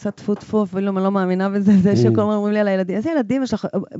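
Nothing to flag here, really: it's speech over G.722 wideband telephone coding, likely at the full 64 kbit/s rate, with the top end running out around 7.7 kHz just as that path does, and there are no faults to point to.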